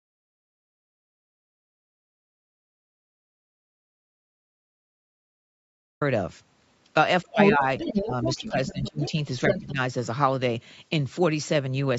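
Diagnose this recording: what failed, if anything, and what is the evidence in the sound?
The input path likely lost its signal while the recorder kept writing silence. From the very start until 6.01 s there is only dead digital silence with no room tone; this audio dropout to silence ends abruptly when the speech cuts in.

The call's echo canceller, likely unable to separate the local talker from loudspeaker echo, attenuated both. This speech suppression in double talk pulls the voice down by around 30 dB at 7.24–7.62 s, around 15 dB at 7.9–9.15 s, and briefly by about 10 dB at 9.72–9.79 s.

Residual loudspeaker echo likely survived cancellation, so the other side's voice leaks through at 7.39–7.56 s, 7.78–8.05 s, 8.23–9.11 s and 9.46–9.72 s. Its level reaches roughly that of the talker, slightly above it early on, and sits well below during the 8.23 s stretch.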